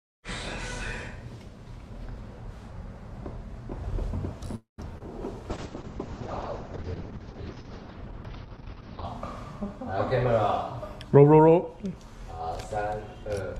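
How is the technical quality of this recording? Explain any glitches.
The recording has four distinct network-related glitches, clustered between about 4.5 and 12 seconds.

Call audio freeze, 4.55 to 4.80 s: the sound stops advancing for about 226 ms. The last sound carries on briefly as a fading buzz, then drops to near silence for about 150 ms before the audio resumes exactly where it left off. The likely cause is packets held up in transit, draining the jitter buffer. Nothing is lost, but a gap is inserted and the delay grows by that amount.

Short concealed packet loss, 4.98 to 5.02 s: roughly 20 ms of audio never reached the decoder in time. The receiver patched the hole by extending the preceding sound for about 22 ms and then crossfading back into the real signal. It is heard as a tiny smear or wobble right after the freeze, and whatever fell in that sliver is simply gone.

Call bitrate drop, 5.51 to 9.11 s: the encoder rate falls from 48 kbps to 7 kbps and stays at its lowest for about 3.5 s. 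At that rate Opus narrows the audio band from 20 kHz to about 6 kHz and quantises much more coarsely. The sound becomes muffled, with a rough, watery texture, until the bitrate recovers just after 9 s.

Jitter buffer speed-up, 11.16 to 11.85 s: the buffer had built up more audio than its target, so the receiver trimmed short pitch-period chunks repeatedly, removing around 70 ms in total. Playback runs at about 108% speed with the pitch unchanged. That stretch sounds hurried before normal pacing returns.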